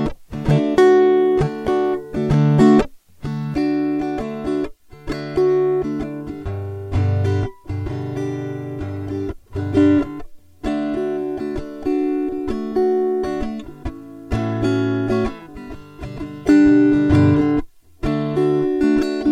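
From 3.54 s to the end, one channel runs about 3 ms late and is summed to mono. This channel delay causes comb filtering, hollowing the music with evenly spaced notches from around 150 Hz.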